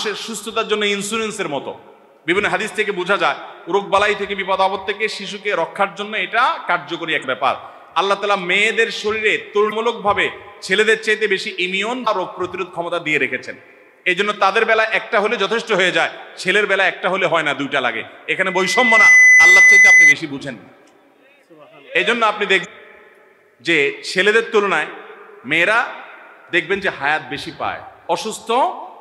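At 7.20 to 7.24 s there is a brief glitch. It is damaged data in a compressed stream. Part of the encoded data is wrong, so the decoder misreads those frames. It loses sync and hunts for the next valid frame header. The same short glitch returns at 9.68 to 9.73 s and at 12.03 to 12.08 s. Each burst lasts about 40 ms.

From 18.31 to 20.15 s a loudspeaker feedback squeal takes over. A microphone is hearing the speaker it drives. At 2 kHz the loop gain passes one, so that tone feeds itself. It swells over roughly 0.7 s into a steady whistle. The squeal peaks at about 10 dB above the programme sound and cuts off at 20.15 s.

At 22.61 to 22.66 s a final blip of damaged stream data sounds. Again the decoder drops the bad frames and resynchronises.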